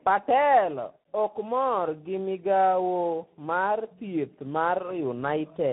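Tandem speech coding runs throughout. The sound was re-encoded in two codecs, likely G.729A and then CVSD. It sounds rough, muffled and warbly, with nothing above 3.8 kHz.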